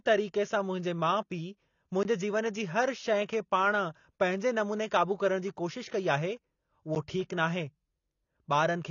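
AAC compression runs through the whole speech clip: nothing is present above 7 kHz, and plainly audible codec damage leaves the sound dull and smeared, with a warbling, fizzy texture on sustained sounds and sibilants. The likely cause is AAC-LC coding at a low rate, consistent with about 24 kbps. The encoder quantised its frequency lines against a hearing model, lowered the cut-off, and left gaps or substitute noise where bits ran short.

A block of digital silence falls at 2.03 s, roughly 20 ms of zeros, with the signal cutting out and back with no fade. That is heard as a tick or a brief hole. A second, shorter block of about 10 ms comes at 6.95 s, just after "जी कोशिश कई आहे", and is heard as a tick or dip. Both fit an output buffer that went unfilled in time or a calculation that produced invalid values.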